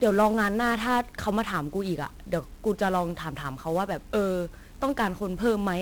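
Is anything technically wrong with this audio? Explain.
Yes. Throughout the speech, 1-bit DFPWM compression: one bit per sample nudges an adaptive level up or down, consistent with about 48 kbps, so heavy broadband fuzz and crackle bury the treble, unlike the warbly, band-limited smear of perceptual codecs.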